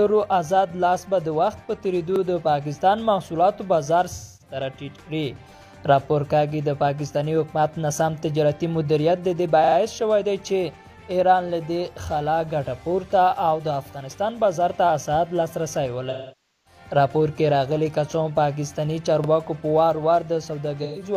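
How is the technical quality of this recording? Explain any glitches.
The recording has two kinds of glitch, repeated buffers and AAC frame loss with concealment.

Repeated buffers at 2.16 s, 9.64 s (three extra plays) and 19.24 s: a late 40 ms buffer replays with hard joins, giving a stutter of identical copies with nothing lost.

AAC frame loss with concealment at 4.14 s (256 ms), 16.09 s (about 0.55 s) and 20.83 s (128 ms): the decoder fills gaps from old spectra, so the sound smears noisily rather than repeating cleanly.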